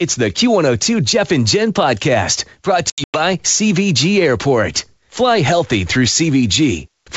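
Packet loss on an ADPCM call runs from 2.90 to 3.21 s: about 180 ms of sound drops out in hard-edged silent gaps scattered across roughly 240 ms, the longest lasting 100 ms. Because the decoder's adaptive predictor and step size lose track of the sender's during each gap, the wideband G.722 speech returns slightly distorted, settling within some tens of milliseconds.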